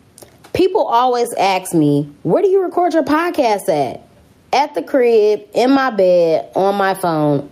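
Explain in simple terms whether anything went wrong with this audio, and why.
Gain pumping runs through the whole recording: loud and soft parts end up closer in level, so the sound is squashed. The likely cause is a microphone turned up far too high, with an automatic level control repeatedly yanking it back down.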